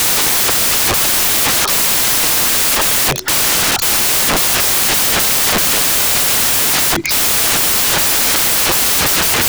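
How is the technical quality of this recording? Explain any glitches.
The technical quality is poor: the whole recording is corrupted by samples built from the wrong bytes. From start to finish, each sample has been assembled incorrectly, with its bytes swapped, misaligned or shifted by one. The rapidly changing low-order bits end up as the most significant part of every value. The result is loud, harsh broadband noise across the entire clip.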